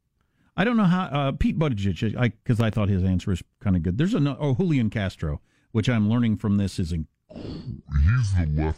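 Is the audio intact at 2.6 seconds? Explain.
No. From 2.60 to 2.75 s, a sudden voltage step, likely from a plug, switch, static discharge or driver glitch, was added to the signal, and the circuitry after it shaped that step into a pulse. This is a loud pop: two sharp pops in quick succession, around ten decibels above the speech, sitting on top of it while the speech continues underneath, just before "his answer was kind".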